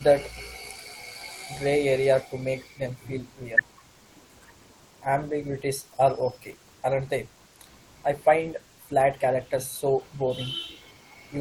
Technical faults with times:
2.27-2.75 speech suppressed in double talk

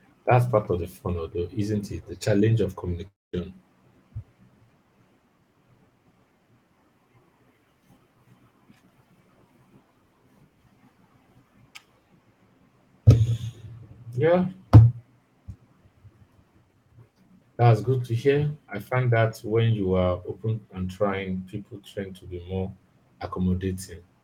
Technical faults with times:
3.07-3.35 long network dropout

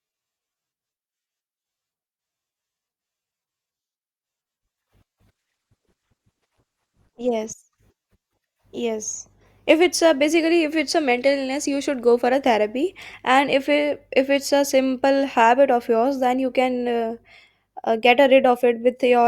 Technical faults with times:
5.31-7.31 adaptive stream at a lower bitrate

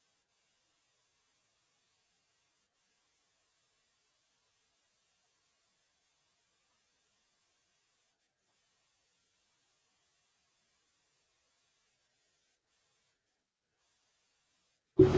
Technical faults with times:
none

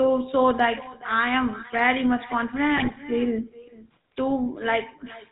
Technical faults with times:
0.00-5.31 echo with no canceller
0.00-5.31 GSM full-rate codec
2.76-2.97 GSM bit errors

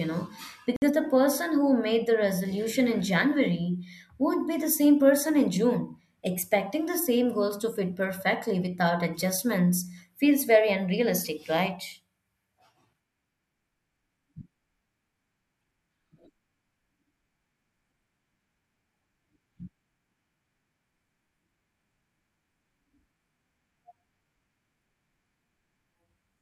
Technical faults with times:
0.76-0.82 Bluetooth stall

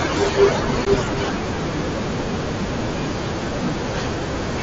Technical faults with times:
0.85 unconcealed Bluetooth headset packet loss

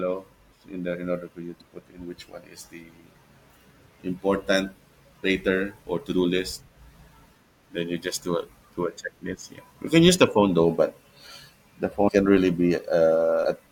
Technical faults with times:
1.60 compressed frames skipped
12.07-12.10 compressed frames skipped

